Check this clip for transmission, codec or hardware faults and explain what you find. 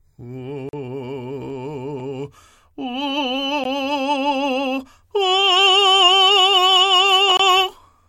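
The music has three blocks of digital silence, at 0.69 to 0.73 s (42 ms), at 3.64 s (about 15 ms) and at 7.37 to 7.39 s (23 ms). In each, the output was replaced by zeros, most plausibly because the playback buffer wasn't refilled in time. The 23 ms gap fits a 1024-sample buffer. The signal drops straight to silence and back with no fade. The shorter gap is heard as a tick, and the longer ones as brief holes.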